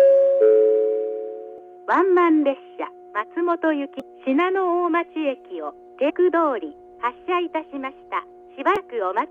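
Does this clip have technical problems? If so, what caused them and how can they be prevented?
Yes. Brief chirps or blips interrupt the sound at 1.58 s, 4.00 to 4.02 s, 6.09 to 6.11 s and 8.76 s. This is damaged data in a compressed stream: corrupted bytes make the decoder misread those frames and lose sync until it finds the next valid frame header. Verify transfers with checksums and carry the stream over a reliable, error-checked connection.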